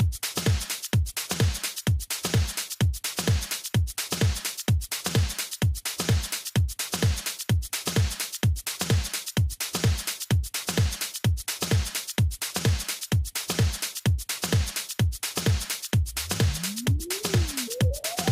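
Listening closely, nothing in the audio stood out as a technical problem.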